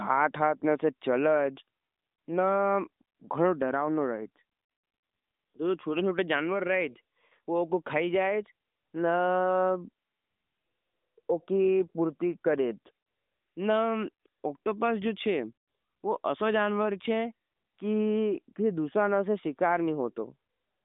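No technical faults occur at any point, so there are none to describe in time order.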